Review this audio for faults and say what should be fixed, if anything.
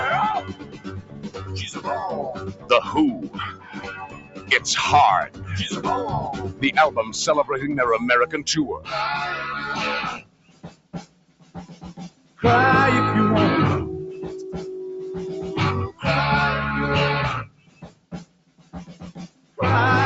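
A noise suppressor applied to music or sounds is active throughout. It treats sustained tones and tails as noise and turns them down. Levels swing by around 20 dB, so the sound pumps and thins while attacks pass through.

The clearest cases of sound cut by the noise suppressor fall at 0.41–1.52 s, 2.34–2.70 s, 3.15–4.50 s, 5.27–5.49 s, 6.98–7.14 s, 10.14–12.40 s, 17.47–19.03 s and 19.27–19.58 s. Held sound sinks by about 12 to 14 dB, and about 7 dB at 6.98 s. Decays are clipped short. The call path's top end, which stops near 8 kHz, sounds normal for Opus at 48 kbps.

To prevent this, disable speech noise suppression, or switch to a music mode, whenever music or other non-speech sound is sent through the call.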